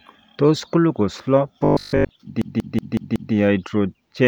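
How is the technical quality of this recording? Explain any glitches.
The recording has two clear playback glitches in the middle of the speech.

Robotic sound from repeated short buffers runs from 1.65 to 2.11 s. The likely cause is new audio arriving too slowly, so the playback side keeps reusing a tiny slice, about 20 ms long, while the real signal is skipped over. Roughly two-thirds or more of that stretch is repetition. The constant repeat rate stamps a fixed 50 Hz buzz onto the speech, which becomes a rigid, metallic drone that only loosely follows the talker.

A system hang loop follows from 2.42 to 3.34 s. Something in the computer or audio driver stalled while the sound hardware kept cycling through the same ring buffer. One chunk of about 186 ms, which fits an 8192-sample buffer, plays back five times in a row. At 5.38 repeats per second it is heard as a mechanical, machine-gun stutter of identical fragments rather than a steady tone, with little or no audio actually dropped.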